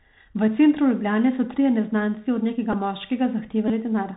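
Throughout the recording the speech carries Bluetooth CVSD headset codec damage, which fits a 64 kbps CVSD link. The coder sends one bit per sample indicating only up or down, with an adaptive step size, so the band stops near 4 kHz and the audio sounds narrow and boxed. When high-frequency energy changes faster than the step can follow, the coder falls behind: sibilants turn scratchy, and a granular hiss sits under the speech the whole time.

At 2.73 s, right after "so trije neznanci od", a Bluetooth headset packet repeat replaces about 7.5 ms of sound, which fits two lost packets. The chip decoded the previous packet's bits again instead of the missing audio, and the result is a very brief buzz near 267 Hz. At 3.68 to 3.71 s a longer repeat covers about 18.8 ms, which points to five lost packets in a row. Because the same 3.75 ms block plays over and over, it produces a short buzz near 267 Hz until valid packets resume.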